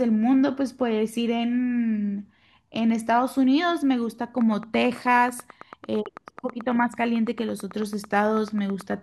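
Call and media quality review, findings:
Train of clicks, 4.41–8.93 s: about 40 regular ticks at 9.1 per second, peaking roughly 5 dB above the speech, audible through pauses. Likely nearby-equipment interference or a struggling interface.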